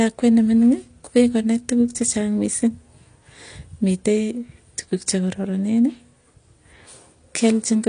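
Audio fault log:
Throughout, AAC compression: speech stops dead above 9.8 kHz and sounds dull and smeared, with obvious codec grit, likely AAC-LC starved at around 32 kbps.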